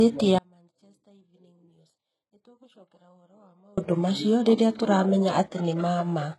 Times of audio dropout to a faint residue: 0.39-3.77

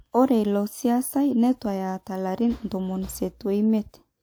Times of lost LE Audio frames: none

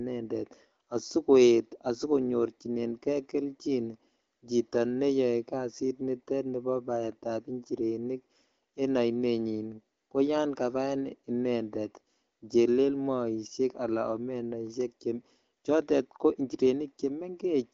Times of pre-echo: none

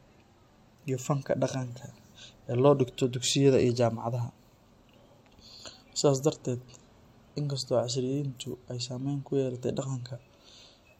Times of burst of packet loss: none

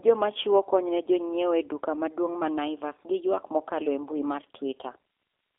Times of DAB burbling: none

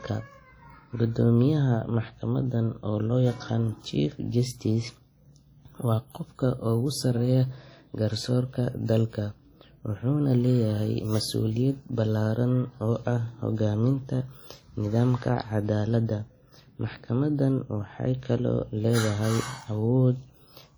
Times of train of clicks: none

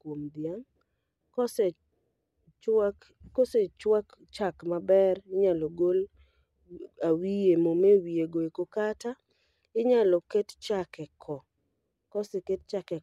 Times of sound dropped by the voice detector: none

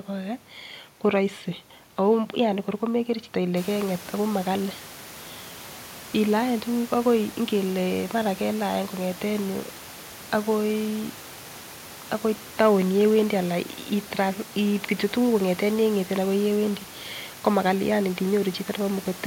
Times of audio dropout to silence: none

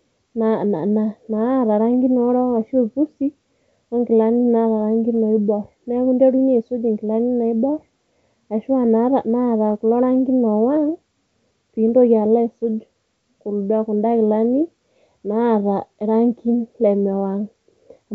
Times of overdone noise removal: none

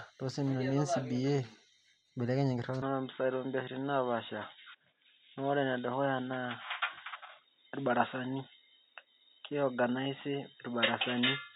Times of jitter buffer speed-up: none

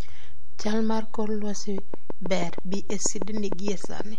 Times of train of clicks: 1.78-4.01

